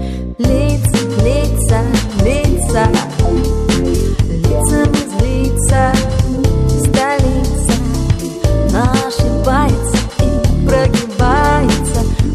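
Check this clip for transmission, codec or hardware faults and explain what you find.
Nothing in the clip points to a transmission, codec or hardware fault. No disturbance of that sort can be heard anywhere in the audio.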